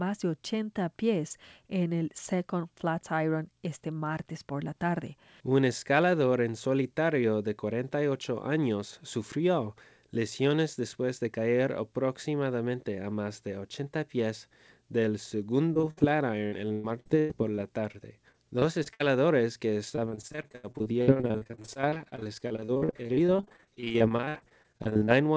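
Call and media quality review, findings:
Repeated packet loss (robotic sound) at 15.74–16.02 s, 16.46–17.96 s, 18.32–19.02 s and 19.90–25.10 s. Jitter-buffer concealment extends the last audio over gaps of up to 117 ms, giving choppy speech with pieces missing. On a spectrogram this shows as smeared, repeated frames below the G.722 ceiling at 8 kHz. The waveform shows copied, looping segments.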